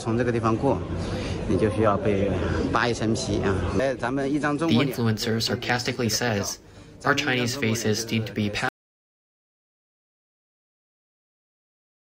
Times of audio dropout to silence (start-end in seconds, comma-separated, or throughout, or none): 8.69-12.00